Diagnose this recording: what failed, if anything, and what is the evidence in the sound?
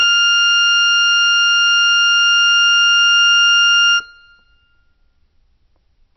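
The codec stage looks like the culprit here, most likely heavy MP3 compression. Across the whole music clip nothing comes through above 6 kHz, so the top end is simply gone, and the coding damage is plainly audible throughout. That fits a starved encoder, something around 24 kbps. With so few bits it chops the treble at a fixed frequency and drops the weaker spectral lines it thinks you won't miss.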